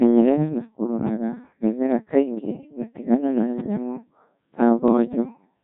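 The whole clip has passed through the Codec 2 vocoder at a very low rate, which fits about 1.6 kbit/s. Only pitch, voicing, energy and a spectral envelope survive, so the speech is resynthesised from sine waves and comes out heavily robotic and buzzy.

From 4.88 to 4.97 s, just after "tigana na nyamũ ta", bit errors on digital voice radio corrupt what sounds like a couple of frames at an error rate of a few percent. The decoded parameters jump, so pitch, level and timbre lurch into a brief warbling bleep.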